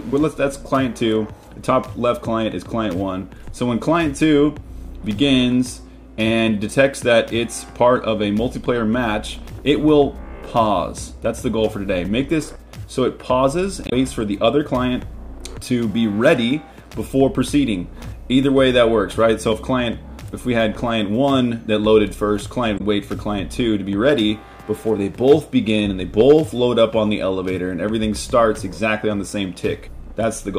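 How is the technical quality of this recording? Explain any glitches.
Two brief glitches affect the stream. Damaged data in a compressed stream appears at 13.86–13.93 s and 22.74–22.81 s: corrupted frames make the decoder misread and resync, producing short disruptions such as a chirp, squawk, click or brief hole that show on a spectrogram as abrupt breaks.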